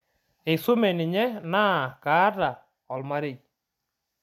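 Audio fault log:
Nothing to log here, as the speech comes across without a single fault worth noting.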